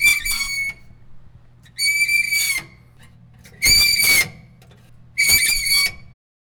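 No technical faults are audible.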